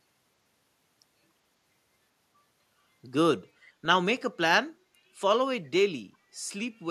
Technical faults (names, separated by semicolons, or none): echo leak